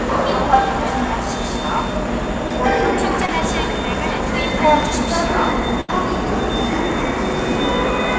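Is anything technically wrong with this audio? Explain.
Yes. The audio has dropouts from a call connection, heard against a call codec's band limit with nothing above 8 kHz, which fits G.722 at 64 kbps.

At 2.48–2.52 s and 3.26–3.30 s there is short concealed packet loss. About 20 ms of audio failed to arrive each time, and the receiver bridged the gap by extending the preceding sound before blending back in. The result is a brief smear or wobble.

At 5.81–5.90 s a burst of packet loss removes about 80 ms. The receiver extended the last sound and faded it out over the gap, giving a short held buzz or fading hiss. The audio then resumes slightly further on, with the intervening portion gone.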